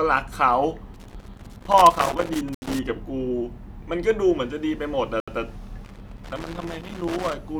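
From 0.94 to 2.79 s and again from 5.85 to 7.33 s, loose connector crackle: a worn contact chops the speech into irregular scratchy bursts, seen as ragged vertical spikes and broadband streaks. Blocks of digital silence at 2.55 s and 5.20 s cut out 75 ms each, abrupt silent gaps with hard edges.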